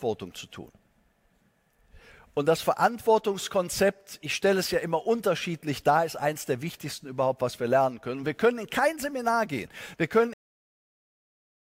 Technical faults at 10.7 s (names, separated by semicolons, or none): cut-off end